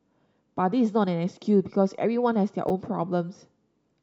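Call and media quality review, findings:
Chunks out of order, 2.68–2.70 s. Brief jumbled blip in the speech. One 10 ms chunk plays one slot late, after its successor. No audio lost, but three hard joins. Probable jitter buffer or capture write ordering.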